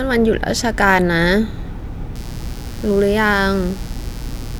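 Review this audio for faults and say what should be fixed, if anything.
Mains buzz runs from 2.15 s to the end at 4.59 s: a raspy, steady buzz on a 60 Hz fundamental, roughly 20 dB under the speech. Sharp switching spikes, twice per mains cycle, spread harmonics up into the kilohertz range. To prevent it, keep dimmers and rectifier-based supplies off the audio circuit and use properly shielded, grounded cabling.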